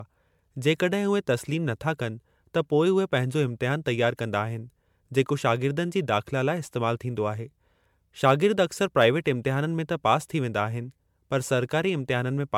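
Throughout the recording, the speech has a swirly, hollow quality with smeared consonant attacks, more degraded than a single MP3 encode would sound. The likely cause is generation loss from around seven successive MP3 passes, consistent with 128 kbit/s. Each re-encode requantises on a shifted frame grid, so noise and spectral holes accumulate. The top end stops near 19.9 kHz.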